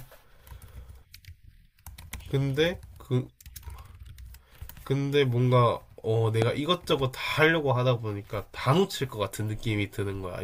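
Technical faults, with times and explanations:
6.42–6.44 s, loud pop: a single sharp pop lasting about 20 ms, standing roughly 15 dB above the speech, which continues underneath without a break. It is likely caused by a sudden voltage step or pulse, such as a plug being disturbed, a switch, a static discharge or a driver glitch, entering the signal chain. The following circuits shape that pulse into a brief spike, so it is heard as a sudden click rather than as part of the speech.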